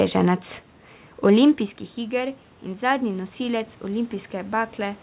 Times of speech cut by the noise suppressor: none

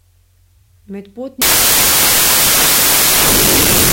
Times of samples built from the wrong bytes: 1.42-3.92

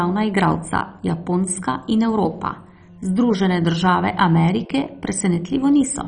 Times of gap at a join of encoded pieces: none

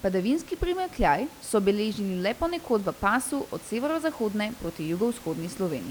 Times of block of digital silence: none

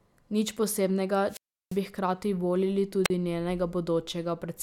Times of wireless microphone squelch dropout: 1.27-1.80, 3.04-3.10

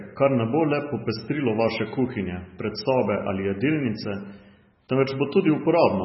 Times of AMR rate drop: none

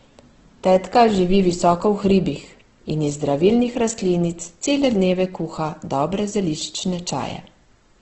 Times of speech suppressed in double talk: none

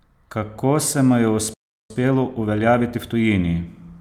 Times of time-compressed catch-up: 1.90-3.34

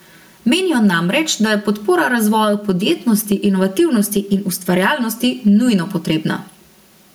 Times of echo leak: none

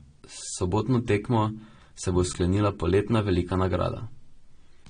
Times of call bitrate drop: none

